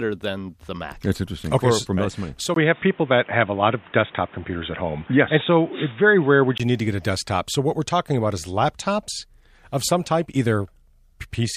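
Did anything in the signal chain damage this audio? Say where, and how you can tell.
Yes. At the capture stage, from 2.54 s to 6.60 s, the sound turns dull and boxy with nothing above 3.8 kHz, after a 20 ms gap. A level shift of around 5 dB and a new noise floor roughly 30 dB down suggest the input likely switched to a poorer device.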